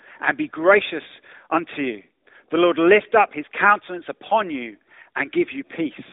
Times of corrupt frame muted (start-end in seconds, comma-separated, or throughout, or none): none